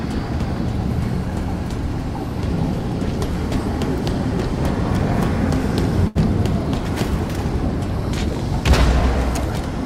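A short stall from a late packet at 6.07 to 6.17 s: the jitter buffer emptied, so the sound was stretched for about 79 ms, then resumed where it stopped.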